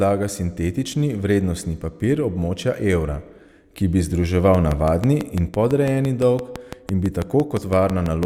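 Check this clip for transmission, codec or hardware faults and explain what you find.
One hardware-type fault is present: a train of clicks running from 4.55 s to 8.24 s, starting just after "območja evra ki bi" and continuing to the end. Regularly spaced pulses arrive at about 6 per second, around twenty in all, each with much the same shape and peaking roughly 10 dB above the speech. The likely source is electrical interference or an interface briefly failing in a repeating cycle. It is heard as steady ticking over the speech and through its pauses.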